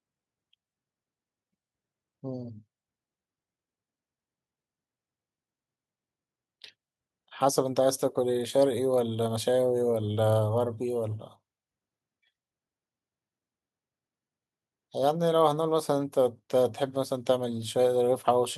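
No technical faults are audible.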